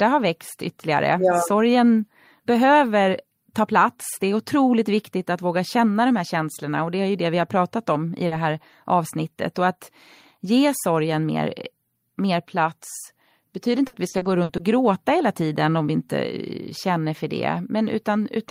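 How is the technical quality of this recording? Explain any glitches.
The recording has two network glitches, both in the speech.

At 8.27 to 8.33 s, between "har pratat om i" and "här avsnittet", a short concealed packet loss occurs. About 40 ms of audio never arrived in time, so the receiver extended the preceding sound and blended back, leaving a brief smear or wobble.

From 13.87 to 14.61 s, between "mer plats betyder inte" and "gråta hela tiden om", repeated packet loss produces a robotic sound. Packets kept dropping, with gaps up to 60 ms. Concealment patched about a third of the stretch, so the speech turns choppy, with pieces missing.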